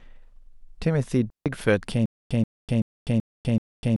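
At 1.30 s the speech drops into a clean hole of near silence lasting about 157 ms, to 1.46 s, with no crackle or noise burst at either edge. That is a digital wireless dropout: the radio link lost more data than it could recover, so the receiver muted the output with a very quick fade rather than passing damaged audio, then faded back in once the signal was decodable again.

From 2.06 s to the end, a 132 ms fragment of speech repeats five times, each copy followed by about 249 ms of digital silence, so the same burst returns every 381 ms at a steady pace. This is stutter with silent gaps, likely from a player or stream that stalled. Each retry replayed the last buffered fragment and then ran empty, and the speech that should have filled those seconds never arrives.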